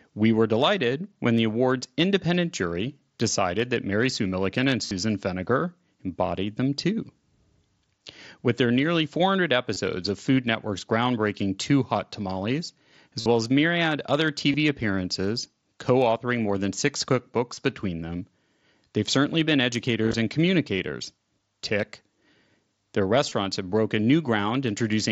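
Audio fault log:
4.86–4.91, 9.74–9.76, 13.20–13.26, 14.52–14.54, 17.55–17.57, 20.03–20.14, 23.29–23.32 s: concealed Bluetooth headset packet loss. Packets on the wideband mSBC headset link dropped, and the phone filled each gap by repeating the closest-matching recent stretch of waveform. That makes a brief buzzy held tone and a slight warble where real audio resumes. The gaps are 22.5 ms at 9.74 s, between "well as myriad other" and "appearances co authoring more", between "authoring more than six" and "between them", and before "have broken". They are 45 ms at 4.86 s and 52.5 ms at 13.20 s. At 20.03 s, 67.5 ms of losses are scattered across 105 ms, with the longest run 30 ms.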